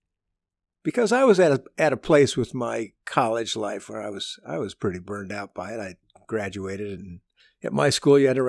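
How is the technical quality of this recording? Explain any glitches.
No technical faults are audible in this recording.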